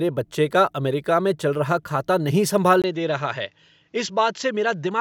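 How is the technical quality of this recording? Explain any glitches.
Quality drops partway through. At 2.82 s, after "चल रहा खाता नहीं", the input likely switched to a poorer device. After a 20 ms gap, nothing remains above 7.6 kHz, the level falls about 5 dB, and faint new noise appears.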